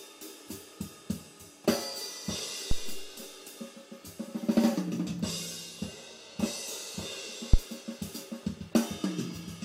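Two phantom power thumps: supply switching on a live input pushes a step through the coupling caps, giving a deep thud at 2.71 s (about -15 dBFS, 111 ms decay) and a harder, 14 ms one at 7.54 s peaking near -6 dBFS.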